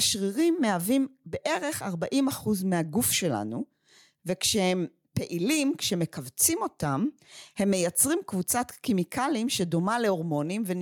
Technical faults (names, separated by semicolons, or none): gain pumping